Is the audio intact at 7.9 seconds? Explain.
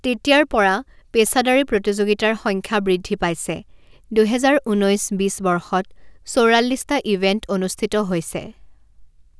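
No. At 7.9 seconds, as throughout the speech, sibilants sound gritty and metallic. This is aliasing: the rate was cut without filtering, which fits a drop from 44.1 kHz to 22 kHz, so content above 11 kHz folds back as false tones about 25 dB below the speech.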